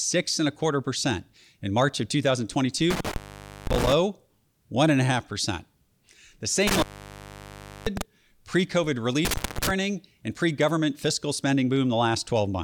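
Intermittent contact occurs three times in this speech, from 2.90 to 3.93 s, 6.67 to 8.02 s, and 9.25 to 9.71 s, just before "and pre government fiscal". A loose plug or cable briefly loses its connection, so the signal drops out for about 0.51 s, 1.04 s and 0.21 s respectively. Each dropout is framed by crackle as the contact scrapes open and closed, with only faint hiss left while the line is broken.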